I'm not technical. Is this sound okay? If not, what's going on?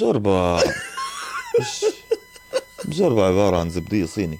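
No. From about 1.04 seconds to the very end, a thin, steady whine sits behind the sound. This is USB whine. A USB connection pulls power in tiny bursts a thousand times a second. That rhythm leaks into the audio through the power or ground wiring. Here it makes a fixed tone at 1 kHz, loudest at 2 kHz. It stays quiet, well under the main sound, but it never changes pitch.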